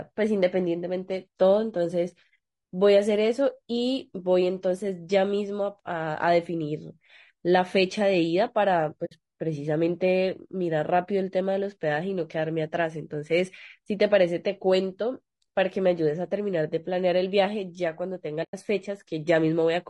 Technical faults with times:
0.00-19.90 low-delay AAC compression
9.05-9.12 AAC frame loss with muting
18.43-18.54 AAC frame loss with muting

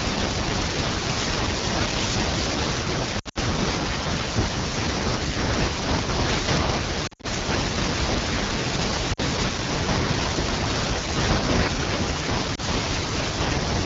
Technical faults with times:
0.00-13.86 AMR wideband (HD Voice) codec
3.19-3.38 lost AMR speech frames
7.07-7.26 lost AMR speech frames
9.13-9.20 lost AMR speech frames
12.55-12.60 lost AMR speech frames

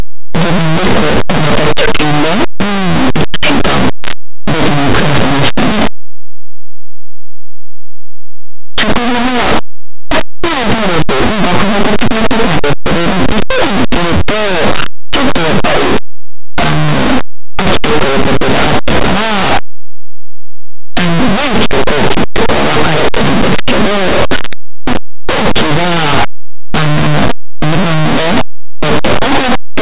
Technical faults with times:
0.00-29.81 linear audio read as companded

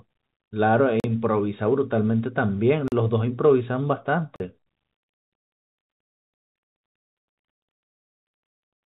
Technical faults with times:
0.00-8.90 clock drift between sender and receiver
0.09-8.90 repeated timing corrections
1.00-1.04 block of digital silence
2.88-2.92 block of digital silence
4.36-4.40 block of digital silence

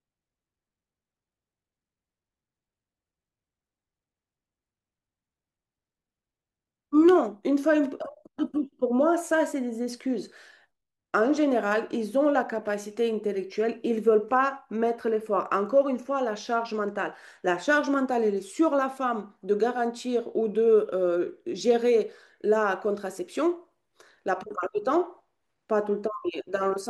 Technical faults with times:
none

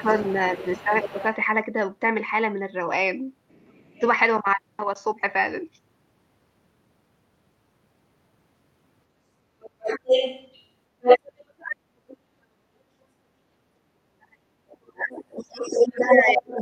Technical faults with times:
0.00-1.36 other side's voice leaking through
0.02-1.15 speech suppressed in double talk
3.49-3.92 other side's voice leaking through
3.93-4.02 speech suppressed in double talk
9.61-12.17 other side's voice leaking through
14.11-16.62 speech suppressed in double talk
14.70-14.75 other side's voice leaking through
15.37-16.62 other side's voice leaking through

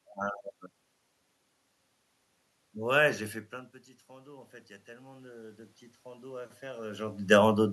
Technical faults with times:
4.07-7.29 automatic gain rising

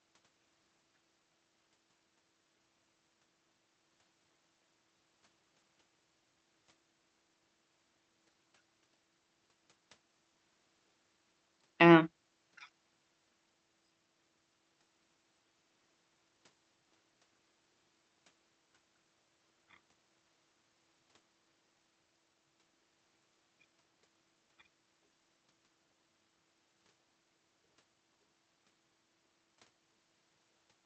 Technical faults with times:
none

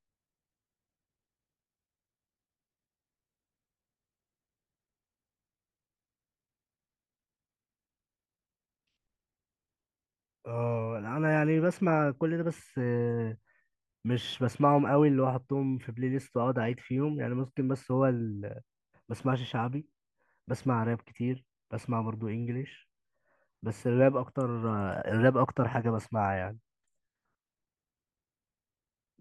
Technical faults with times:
none

